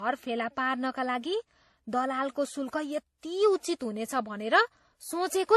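Throughout the speech, nothing reaches above 12.5 kHz, and the different codec artefacts overlap. Likely transcoding between lossy codecs, each re-encoding earlier damage.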